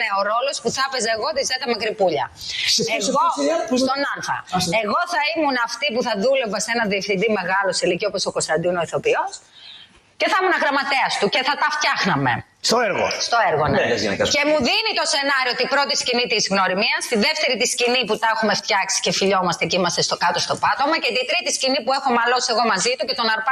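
A noise suppressor applied to music or sounds runs through the whole clip. Built for speech, it treats sustained material as noise and keeps shifting its gain by around 5 dB, so held parts and tails pump and thin while onsets pass more cleanly.

Sound cut by the noise suppressor occurs from 2.25 to 2.45 s, 4.08 to 4.54 s, 9.27 to 10.21 s and 12.42 to 12.64 s. Here it clamps down much harder, with drops of about 15, 17, 18 and 17 dB, so the sound briefly sinks or its decay is chopped off.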